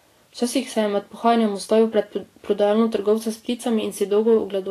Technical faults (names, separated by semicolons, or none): Vorbis compression